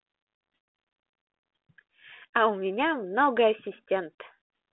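No technical faults can be heard anywhere in the speech. It comes over a G.726 ADPCM telephone path at 32 kbit/s, so the sound sits in a line band of 250 Hz to 3.4 kHz, with nothing above 3.9 kHz and only a light trace of the codec's coding grain.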